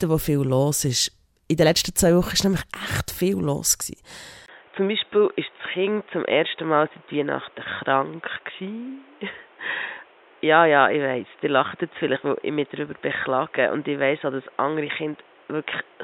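Speech turns dull and boxy at 4.46 s, after a 20 ms dropout, and stays that way to the end, likely because the input switched to a poorer device. A spectrogram shows a flat ceiling at 3.8 kHz and a new noise floor roughly 30 dB down, with loudness unchanged.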